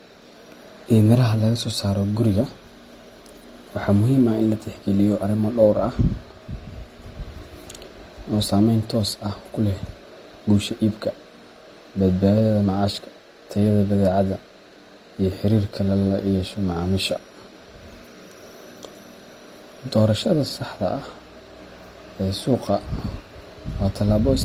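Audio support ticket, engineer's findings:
Speech, whole clip: artefacts of one codec with a second layer of coding artefacts on top, two artefact textures heard at once. Nothing above 20.2 kHz. Likely transcoding between lossy codecs: HE-AAC then Opus, texture fitting roughly 32 kbit/s each, with Opus spending bits re-encoding the AAC damage.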